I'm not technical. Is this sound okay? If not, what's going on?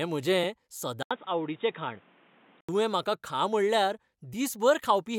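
No. An input switched to a poorer device from 1.03 to 2.69 s: the speech suddenly turns dull and boxy, with a brief gap at the switch, faint new background noise and nothing above 3.8 kHz, likely because the recording jumped to a lower-quality microphone, then back.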